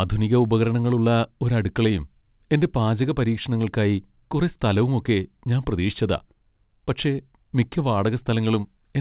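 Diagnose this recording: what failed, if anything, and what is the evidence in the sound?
Nothing in the recording points to a failure: the speech came through a WebRTC call path using the G.711 mu-law codec at 64 kbps, so its content stops at 4 kHz, which is that narrowband telephone codec's normal limit, and the signal shows no sign of anything going wrong along the way.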